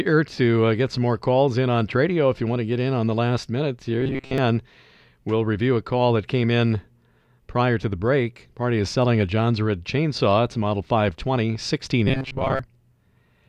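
Right after "the last minute here", from 4.01 to 4.38 s, and again from 12.08 to 12.59 s, the speech collapses into a rigid, metallic buzz near 133 Hz: robotic sound from repeated short buffers, likely from audio arriving too seldom, with about 7.5 ms slices replayed in place of most of the real signal.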